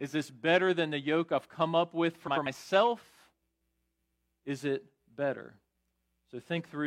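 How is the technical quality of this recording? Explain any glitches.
One glitch stands out in the speech, right after "I've come up with", from 2.27 to 2.47 s: a brief garbled flutter. This is frames out of order. Two neighbouring blocks of about 93 ms each, which fits two-frame runs, were decoded swapped, so the halves play exchanged with no time lost.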